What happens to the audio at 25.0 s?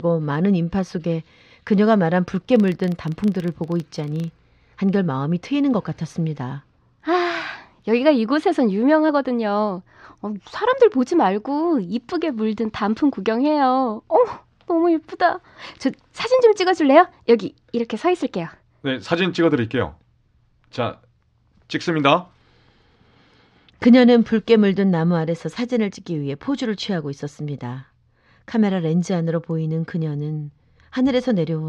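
Nothing goes wrong at 25.0 s; the speech runs on intact through that moment, with no dropout, click, glitch or other technical fault to be heard.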